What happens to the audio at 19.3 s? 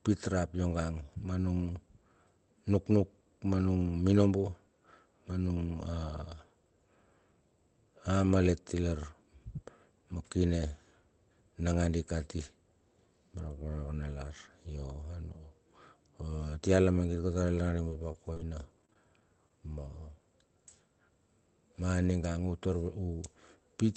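At 19.3 s the speech is in a stretch of repeated packet loss, 17.89 to 19.51 s. About a dozen short holes, each stretched over with preceding sound, make it choppy and robotic.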